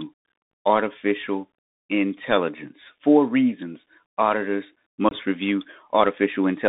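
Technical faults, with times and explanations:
Throughout: Bluetooth CVSD headset codec. The speech is confined to roughly 200 Hz to 3.7 kHz, and the damage is plainly audible: grainy hiss under the voice, scratchy s sounds, and roughness on loud, bright syllables where the one-bit delta stepping can't keep up. That behaviour fits a 64 kbps CVSD headset link. On a spectrogram, energy stops sharply near 3.7 kHz, with a speckled noise floor below it and smeared high-frequency bursts.
0.51 s and 5.09 to 5.13 s: unconcealed Bluetooth headset packet loss. There are two short dropouts, about 19 ms just before "artificial intelligence" and about 23 ms just after "reasons auditors". Each points to a handful of lost voice packets that nothing filled in. The sound cuts out abruptly and returns briefly quieter. The waveform shows a flat gap with steep edges, and the spectrogram shows a thin vertical blank stripe.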